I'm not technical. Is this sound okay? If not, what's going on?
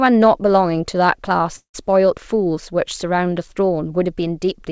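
No. From about 1.56 to 1.76 s the audio most likely stopped arriving over the network, which is called a long network dropout. During that gap the receiver tried to cover it by stretching the last sound into a fading buzz or hiss, then fell silent for about a tenth of a second. When the audio returns, the speech that was lost during the gap is simply gone.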